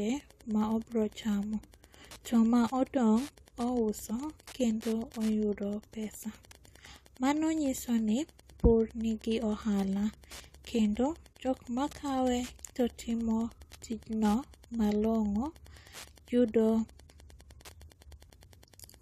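Wi-Fi interference runs under the speech from start to finish: a nearby Wi-Fi radio's beacon bursts are rectified by the audio circuitry, producing a steady ticking every 102.4 ms, close to ten times a second, at roughly 30 dB below the speech.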